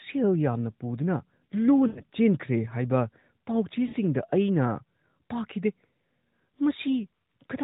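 At 1.88 to 2.02 s, and again at 3.88 to 3.96 s, the speech smears into a drawn-out, fading buzz before recovering weakly. These are lost AMR speech frames, where the decoder stretched the last good pitch and vocal tract settings over gaps of 80 ms and 60 ms.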